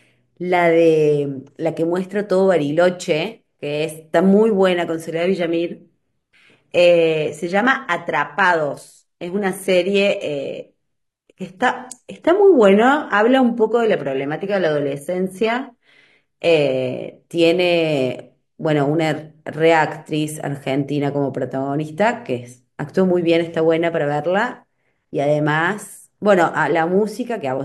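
An adaptive stream dropping to a lower bitrate runs from 5.16 s to 17.16 s, a twelve-second stretch where the player switched to a leaner version of the speech when the connection slowed. The change is abrupt and gapless. The treble loses its natural detail and takes on a synthetic, swishy sheen, with more codec artefacts, which points to a fall from roughly 96 kbit/s AAC to about 20 kbit/s HE-AAC. Full quality returns just as suddenly.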